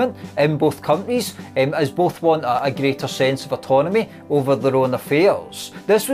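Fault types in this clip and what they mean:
Dropped buffer (overrun): two points where the sound skips ahead a few milliseconds with no silent gap, unlike a dropout; likely samples overwritten unread.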